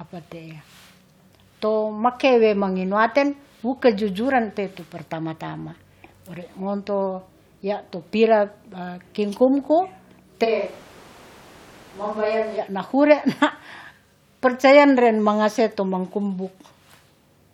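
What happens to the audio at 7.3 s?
Nothing goes wrong at 7.3 s; the speech runs through that moment intact, with no dropout, click, distortion or other fault.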